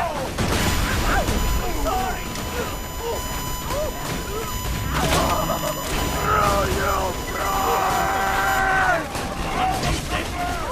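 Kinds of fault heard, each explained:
USB whine: a steady tone fixed at 1 kHz runs under the sound from about 0.59 s to 8.59 s, sitting roughly 10 dB below it. Its pitch matches the 1 ms frame rate at which a USB bus draws current, so the bus's supply ripple is leaking into the audio through power or ground. Mains hum would sit low, at 50 or 60 Hz and their harmonics. This tone stays pinned at exactly 1 kHz instead.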